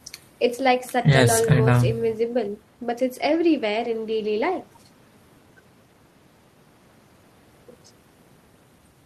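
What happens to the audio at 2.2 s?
At 2.2 s the speech runs on intact, with no dropout, click, distortion or other audible fault at that moment.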